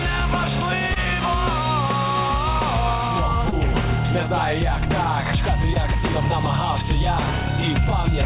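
Brief smears or wobbles at 0.94 to 0.98 s, 3.50 to 3.54 s and 5.74 to 5.92 s, where a short sound can drop out entirely. Each is a short concealed packet loss. About 20 ms of the stream arrived too late to decode, and the receiver covered the hole by extending the preceding sound, pitched or noise-like, before blending back. The third adds a couple of milliseconds, and the whole clip carries the 4 kHz ceiling of its G.711 call path.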